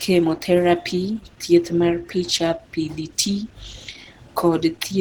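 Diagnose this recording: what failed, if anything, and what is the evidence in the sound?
Codec stage: throughout the speech, the sound is plainly hoarse and grainy, yet still extends to about 20.3 kHz. This likely points to Opus compression in hybrid mode at around 16 kbps, which fills bands with folded or noise content instead of leaving MP3-style swirling holes.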